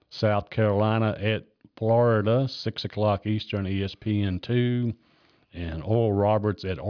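Speech makes up the whole recording, and no technical fault can be heard in it. Nothing in the audio stands out as a problem, so there is nothing to time or trace to a cause.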